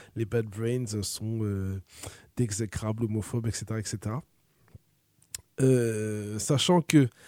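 Speech recording with no audible technical faults.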